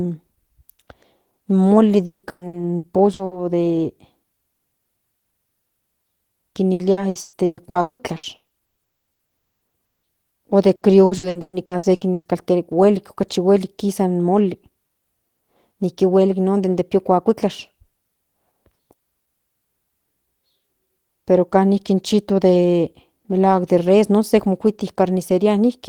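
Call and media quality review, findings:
Repeated packet loss (robotic sound), 2.05–3.34 s (just after "in moli"), 6.73–10.06 s, 10.75–12.28 s. Choppy speech with pieces missing. Jitter buffer/PLC repeatedly extends the last frame over lost packets: 6, 14 and 9 gaps; roughly 40% of each span concealed; gaps up to 180 ms (120 ms in the last burst). Spectrogram: smeared, frozen harmonic blocks alternating with clean speech. Waveform: copied, periodic cycles between gaps.

Long network dropout, 8.83–9.10 s and 9.37–9.64 s, inside the second robotic burst. About 0.24 s of audio missing each time. The gap is silent, and speech resumes without the lost part. Likely cause: network stall exceeding jitter buffer depth. Spectrogram: a blank column. Waveform: flat line.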